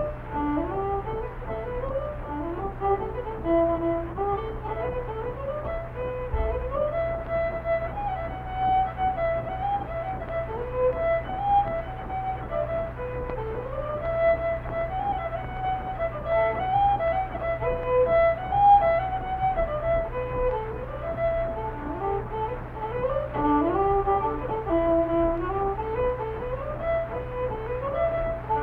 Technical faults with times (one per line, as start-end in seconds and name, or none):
none